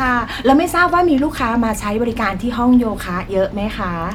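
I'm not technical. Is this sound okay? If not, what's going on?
Yes, nothing wrong can be heard in this recording.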